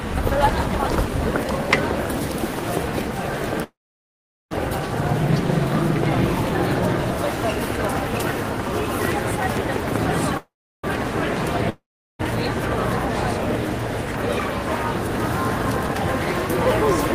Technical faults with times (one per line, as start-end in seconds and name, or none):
3.63-4.53 call audio freeze
10.37-10.85 call audio freeze
11.69-12.21 long network dropout